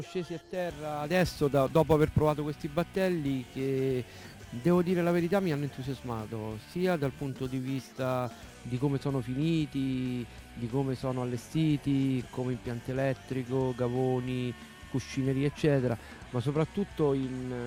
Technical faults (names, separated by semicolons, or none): sample clock jitter